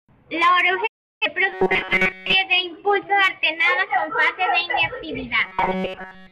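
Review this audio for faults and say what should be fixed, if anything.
A digital broadcast dropout mutes the speech from 0.86 to 1.26 s after a 20 ms fade. About 341 ms of audio is lost, which fits eight failed frames. Stronger reception or more error protection would prevent it.

Robotic sound from repeated short buffers appears at 1.52 to 2.35 s and 5.44 to 6.32 s. A rigid 188 Hz buzz is heard, likely because a roughly 5.3 ms buffer was replayed in place of most of the real audio. A larger buffer or a faster audio thread would prevent it.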